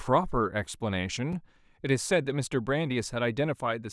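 At 1.33 s there's a block of digital silence, about 5.3 ms of zeros, likely a missed buffer deadline fitting 128 samples, heard as a sharp tick.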